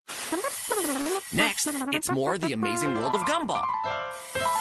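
At 1.01 to 1.07 s, and again at 3.11 to 3.15 s, there is short concealed packet loss: about 40 ms and then about 20 ms of audio never arrived, and the receiver papered over each gap by extending the preceding sound. Each lands as a brief smeared wobble. On a spectrogram the patch shows as a stretch of copied, oddly uniform texture that breaks the natural contour. On the waveform it shows as a patched stretch that fades back into the real signal. The call path above it, whose top end stops near 12 kHz, fits Opus coding.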